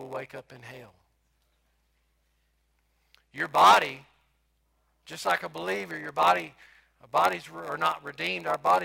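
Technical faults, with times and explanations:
Throughout, block size mismatch (padded): short blocks get zero-filled, so you hear a 93.8 Hz buzz and speech slowed to 0.938x with its timbre intact, fitting 512-sample reads.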